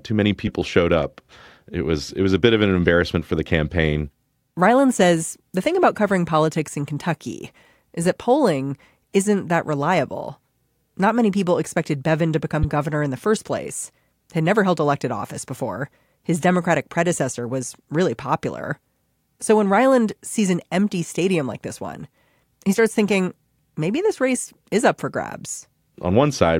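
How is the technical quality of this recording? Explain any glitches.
The recording has four bursts of corrupt frames that were decoded anyway. Damaged bits misplace energy in frequency, causing brief chirps. One occurs at 0.47 s, between "too many" and "showed up". A louder, longer burst runs 12.54–12.65 s, before "governor in the first". Quieter blips fall at 22.73–22.77 s and 24.48 s, before "is up for".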